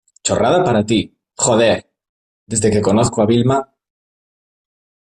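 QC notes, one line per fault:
No fault found in the speech.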